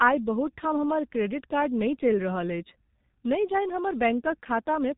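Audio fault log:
throughout G.723.1 codec: the audio passed through a low-rate telephony codec working in coarse 30 ms frames, with nothing above 3.8 kHz and heavy damage, which fits a rate near 6 kbit/s; speech sounds muffled and hoarse, consonants smeared together.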